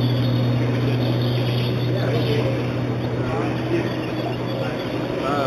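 Imaging from linear upsampling runs throughout the audio: the top of the band sounds dulled, and a faint metallic shimmer sits above it. This fits audio raised from an 8 kHz rate to 44.1 kHz by joining samples with straight lines. That weak filter leaves a mirrored copy of the spectrum between 4 and 8 kHz, roughly 25 dB below the signal.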